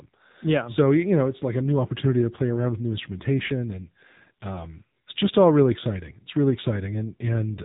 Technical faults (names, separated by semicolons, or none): AMR narrowband mobile codec